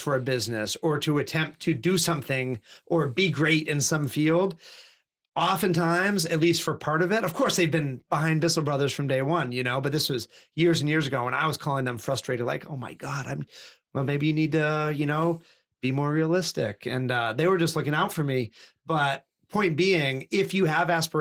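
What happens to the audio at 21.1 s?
Nothing goes wrong at 21.1 s; the speech carries on intact through that moment with no audible fault.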